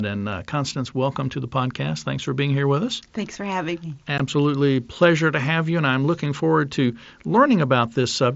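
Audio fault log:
4.18 s, unconcealed Bluetooth headset packet loss: a 15 ms hole with hard edges where two headset frames vanished, left silent rather than smoothed over like concealed loss.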